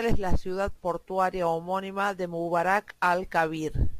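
Right from the start and running through the whole clip, there's crude rate conversion on the speech. The samples were stretched to a new rate by just repeating the nearest one, with no filtering, and the pattern fits a 44.1 kHz to 48 kHz change. That leaves a grainy, inharmonic fizz that tracks the louder and brighter parts of the speech. It sits roughly 30 dB down.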